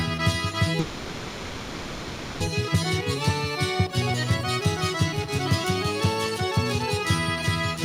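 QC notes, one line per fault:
0.79–2.42 s, call audio freeze: a 1.6 s fading buzz holds the last sound, then audio resumes intact, running late; likely delayed packets emptying the jitter buffer.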